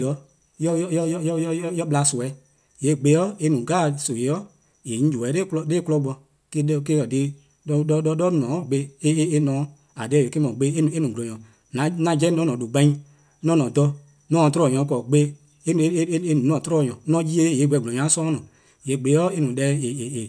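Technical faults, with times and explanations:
No technical faults can be heard anywhere in the recording.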